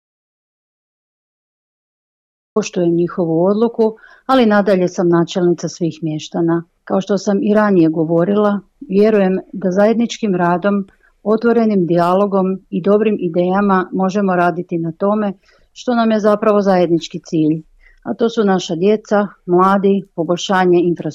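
The audio opens in dead silence with no room tone until 2.56 s, an audio dropout to silence, most likely from a lost input while recording continued.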